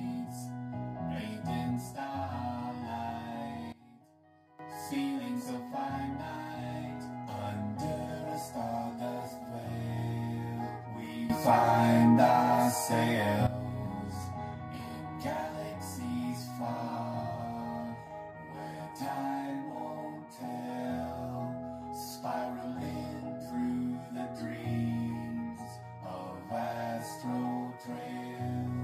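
The audio has two sudden gain jumps. At 3.72 s the level drops by about 17 dB and stays there until 4.59 s, then snaps back. At 11.30 s it rises by about 12 dB and holds until 13.47 s. The sound and the background noise shift together, with no fade in or out. The likely cause is a digital gain setting applied from one sample to the next without a ramp.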